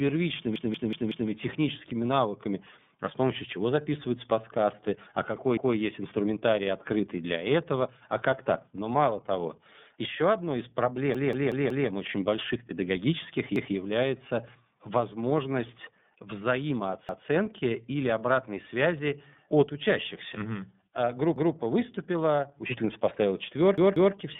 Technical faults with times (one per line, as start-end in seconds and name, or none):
0.00-24.39 iLBC codec
0.56-1.30 repeated buffer
5.57-5.76 repeated buffer
11.15-11.89 repeated buffer
13.56-13.75 repeated buffer
17.09-17.28 repeated buffer
21.36-21.55 repeated buffer
23.78-24.15 repeated buffer